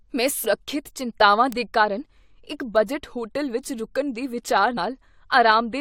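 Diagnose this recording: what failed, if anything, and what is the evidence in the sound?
The codec stage failed, showing damaged data in the compressed stream. Brief glitches at 0.44 s, at 2.59 s just before "ਬਜਟ ਹੋਟਲ ਵਿੱਚ ਰੁਕਣ", and at 4.77 s after "ਹੋਟਲ ਵਿੱਚ ਰੁਕਣ ਦੇ" are the decoder losing frame sync and resyncing. Each lasts several milliseconds, not a single tick.

A separate fault is a bit error spike in the sample data. One-sample ticks at 1.52 s and at 2.76 s, the second also near "ਬਜਟ ਹੋਟਲ ਵਿੱਚ ਰੁਕਣ", come from a flipped bit making one value leap and return. Unlike the codec glitches, each is instantaneous and broadband, with no tonal colouring.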